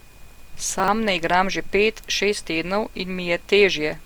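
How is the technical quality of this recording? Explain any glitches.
The recording has two faults: a smeared, hollow quality throughout and a brief jumble near the start.

Generation loss runs through the whole clip. The speech sounds swirly and hollow, and consonant attacks are blurred. The likely cause is repeated lossy encoding, about three passes through a codec consistent with Opus near 64 kbit/s. Each pass quantises on a shifted frame grid, so noise and spectral gaps accumulate.

Chunks out of order occur from 0.80 to 0.88 s. Two 40 ms blocks are swapped, so one plays a chunk late. No audio is lost, but the sequence is wrong. The three hard joins produce a short garbled stutter.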